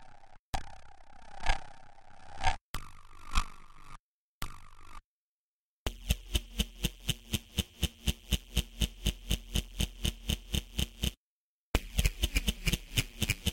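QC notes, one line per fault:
No fault found, so there are no QC notes to log for this audio.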